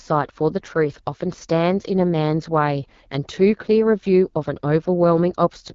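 Speech, squeezed through the AMR wideband (HD Voice) codec for the whole clip. It has that rough, raspy edge you get at the bottom modes, which fits roughly 8.85 kbit/s. Nothing survives above 7.5 kHz, and the top band sounds like shaped hiss rather than real detail.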